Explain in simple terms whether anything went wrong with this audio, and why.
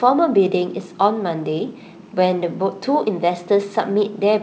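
Nothing went wrong that I could hear: the speech comes across steadily, with no dropouts, glitches or distortion standing out anywhere in the recording.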